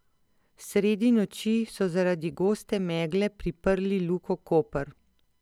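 No technical fault can be heard anywhere in the speech. There is nothing to mark at any point in time.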